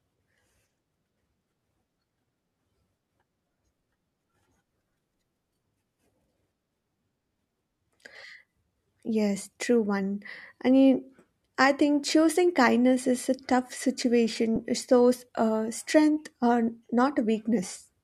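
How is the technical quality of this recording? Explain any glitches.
The recording has one glitch. At 14.56 s, lost LE Audio frames left the LC3 decoder to refill roughly 10 ms, fitting a single frame, with a sign-scrambled copy of the previous spectrum, giving a brief noisy smear in the speech.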